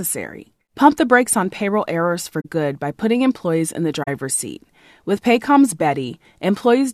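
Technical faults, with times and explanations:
2.40–2.46 s and 4.03–4.08 s, corrupt frame concealed: right after "brakes on payroll errors" and again after "putting employees in the", damaged AAC frames get covered by the decoder, each concealment spanning roughly 60 ms.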